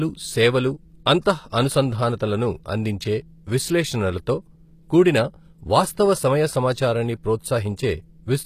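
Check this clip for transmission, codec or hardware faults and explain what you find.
A codec fault runs through the whole clip: likely HE-AAC compression at a low rate fitting 24 kbps, rebuilding treble by band replication, so s sounds turn gritty and nothing sounds above 14.9 kHz.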